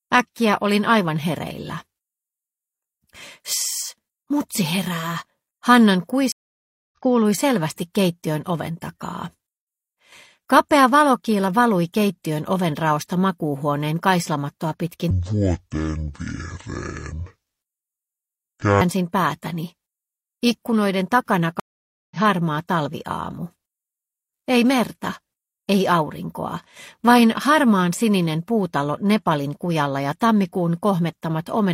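At 6.32 s the audio cuts to silence for about 0.6 s, the signature of a stream reconnect: the connection broke, the player went quiet, reconnected and started a fresh decoder mid-stream. Unlike a simple dropout, the sound does not pick up where it stopped. It resumes roughly 0.4 s further along, so material is skipped, and it returns with a brief muted or faded-in onset as the new decoder settles, ending around 6.96 s.

From 15.10 to 18.81 s a section plays at the wrong speed, at 0.531 times normal, which drops everything by about ten semitones. Tempo and pitch fall together, making the sound deep and dragged. This sets it apart from a pitch-shift effect, which would alter pitch while keeping the timing. The likely cause is the section being played or edited against the wrong clock.

At 21.60 s a second stream reconnect follows the same pattern. About half a second of silence gives way to audio that has again jumped roughly 0.4 s ahead, and the fade-in completes by 22.17 s.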